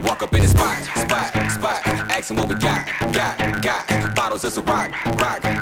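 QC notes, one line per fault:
Throughout: block size mismatch (truncated). A 100 Hz buzz sits under the sound and everything runs 1.16 times fast. Each written block, which fits a 512-sample size, loses its end before the next stage reads it, so cuts recur at the block rate while timbre holds.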